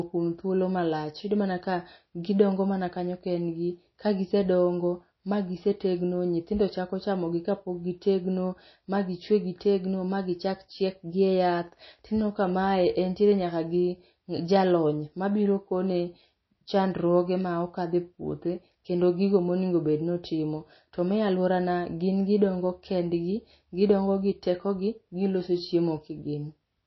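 Speech, with MP3 compression audible throughout. Nothing is heard above 5.8 kHz, and the sound turns watery. That likely comes from a very low bitrate, around 24 kbps.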